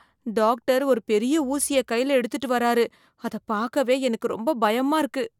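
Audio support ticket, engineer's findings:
No audible faults found in the speech. No action required.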